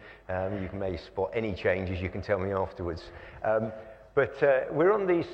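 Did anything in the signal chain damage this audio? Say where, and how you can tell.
No, nothing in the chain audibly damaged this audio.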